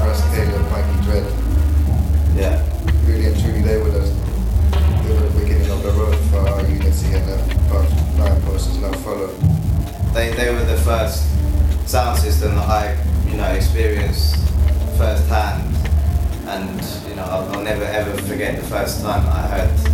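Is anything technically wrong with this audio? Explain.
Yes. An unreliable data bit runs throughout: one marginal bit flips randomly, adding identical steps of about -22 dBFS, heard as constant crackle persisting through pauses.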